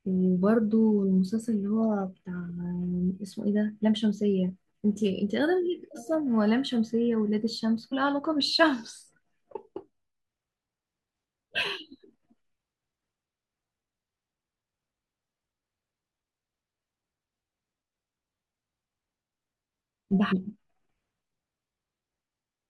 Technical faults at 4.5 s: damaged data in a compressed stream

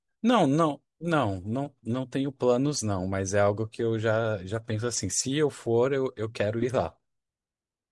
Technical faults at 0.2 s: none

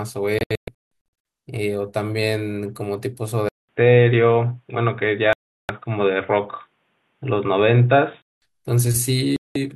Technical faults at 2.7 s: none

